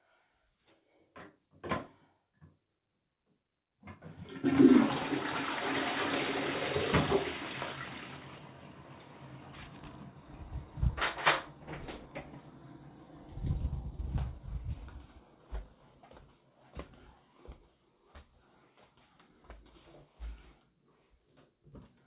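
Jitter buffer speed-up runs from 15.3 to 16.65 s in this recording of everyday sounds, carried over a call line with nothing above 4 kHz. The receiver trimmed short pitch-period slices repeatedly, about 150 ms in total, so the sound plays roughly 10% faster without any pitch change.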